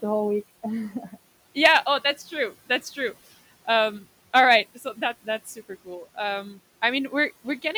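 Speech, where the noise suppressor mistakes parts of the speech for noise and cuts them at 0.9–1.15 s, 4.75–5.02 s and 5.45–5.88 s, dropping them by about 9–12 dB.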